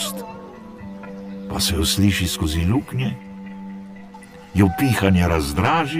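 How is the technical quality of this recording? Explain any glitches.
The recording has one persistent fault: channel delay (comb filtering), present for the whole clip. The sound is hollow and phasey throughout. One channel lags the other by around 10 ms, so summing to mono cancels shared content at evenly spaced frequencies, with fixed notches starting near 50 Hz and repeating about every 100 Hz.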